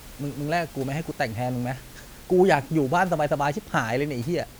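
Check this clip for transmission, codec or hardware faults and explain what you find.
No faults found.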